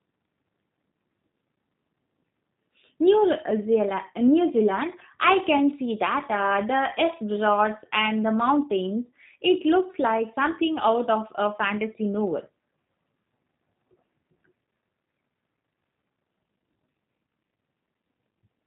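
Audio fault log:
throughout, G.729 codec: the speech has been squeezed through a low-rate coder, and its character points to G.729A at 8 kbit/s. Each 10 ms frame is rebuilt from a vocal tract filter, a pitch predictor and a few pulses, so the result sounds plainly rough and slightly synthetic. On a spectrogram, energy stops dead at 3.8 kHz, with smeared, blocky harmonics below. The waveform looks smoothed, with pulse-like excitation.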